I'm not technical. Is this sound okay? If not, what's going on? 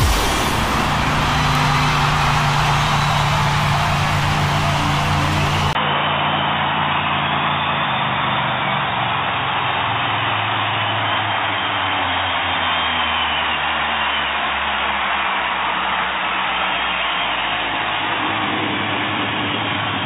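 No. At about 5.73 seconds the recording likely switched to a poorer input, most probably another microphone or a headset. This is an input switched to a poorer device. There is a very brief gap of about 20 milliseconds at the switch. From then to the end, nothing above about 3.8 kHz comes through, so the sound turns dull and boxy, with faint new background noise, though the loudness stays about the same.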